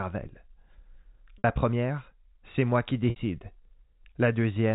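Packet loss with pitch repetition at 1.38–1.44 s and 3.10–3.16 s: each 60 ms gap, consistent with three 20 ms packets, is bridged by a repeated pitch period, heard as a brief held buzz.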